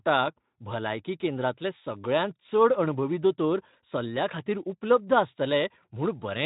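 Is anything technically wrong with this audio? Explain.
No, nothing stood out as technically wrong when listening to this speech clip.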